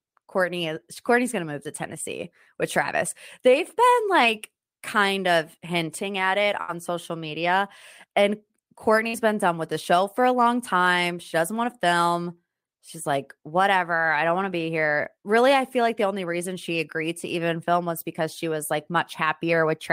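A speech recording with two bursts of packet loss, at 6.61 to 6.71 s and 9.08 to 9.16 s. Each time, the receiver stretched the last received sound for about 67 ms and then 53 ms, fading it out, before jumping ahead past roughly 60 ms of lost speech. On a spectrogram each gap shows as a frozen, smeared band dimming toward silence, then an abrupt resumption; the waveform shows a decaying repeated pattern ending in a discontinuity.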